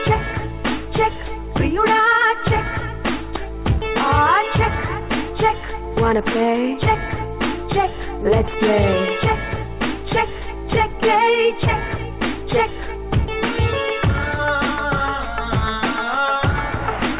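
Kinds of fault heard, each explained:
Jitter buffer speed-up: from 3.94 to 6.75 s the receiver had too much audio queued and kept snipping out pitch-period-sized pieces to catch up. The sound runs 5% fast at the same pitch, dropping about 150 ms in total.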